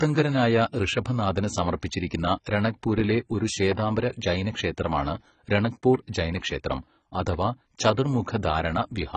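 Speech with AAC compression damage audible throughout: the voice sounds dull and smeared, with a watery, warbling fizz on sibilants and held vowels. Nothing reaches above about 8.6 kHz, so a spectrogram shows a hard ceiling there, with ragged holes and blotchy patches in the upper bands where detail has been dropped or filled with noise. This heavy damage likely comes from low-bitrate AAC-LC, which fits a rate around 16 kbps.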